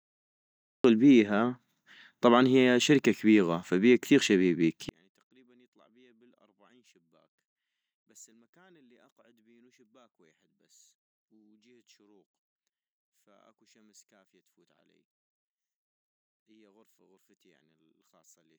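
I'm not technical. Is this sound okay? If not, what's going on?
No. Two faults are audible in this speech clip.

The first is a cut-off start. The opening 0.84 seconds is dead digital silence, and at 0.84 s the speech jumps in mid-sound rather than beginning naturally. There is no gentle lead-in, because the recording began a moment after the speaker had already started, so the first part of what was said is missing and the entry is abrupt.

The second begins at 4.89 s, right after "كبيغة فبيها كثيغ شبيبيك", and lasts to the end. The voice suddenly drops to a faint trace, far quieter than before. This is likely one channel inverted: one side of the stereo pair was flipped upside down electrically, so when the two sides are combined into one, the voice, which sits equally in both, cancels itself out almost completely.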